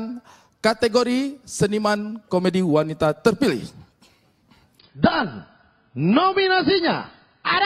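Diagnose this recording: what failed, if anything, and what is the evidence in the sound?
The failure is at the network stage: an adaptive stream at a lower bitrate. At 4.79 s the quality drops suddenly, with no gap. Nothing remains above 5 kHz through to the end. Codec artefacts rise. This fits a player falling from about 96 to 16 kbit/s AAC.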